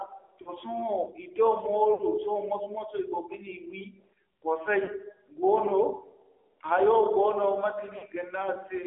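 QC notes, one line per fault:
Throughout: AMR narrowband mobile codec. Buzzy, synthetic texture from low-rate vocal-tract modelling, consistent with a 7.4 kbps mode. The spectrogram shows energy confined to roughly 300 Hz–3.5 kHz, with a hard ceiling.
0.42–0.53 s, 1.94–2.03 s (after "i do"), 4.84–4.90 s, 7.98–8.05 s (after "goono mate"): lost AMR speech frames. The decoder repeats stale pitch and spectral settings with falling gain across 40–60 ms gaps, so the sound smears and dips. The waveform shows a brief envelope sag, and the spectrogram shows blurred, flattened harmonics.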